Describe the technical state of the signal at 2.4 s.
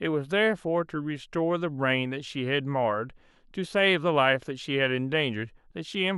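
At 2.4 s the signal carries the fault of a resampler restarted on every block, running from 1.68 s to the end of the clip. Each 40 ms block is converted in isolation during a 48 kHz to 44.1 kHz conversion, so every block edge is computed without its true neighbouring samples. The result is a faint, strictly regular tick at 25 Hz, heard only while speech is present. Unlike buffer dropouts, nothing is missing and there are no gaps.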